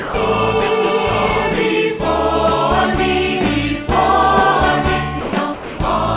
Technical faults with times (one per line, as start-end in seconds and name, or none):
0.00-0.14 sound dropped by the voice detector
5.21-5.78 sound dropped by the voice detector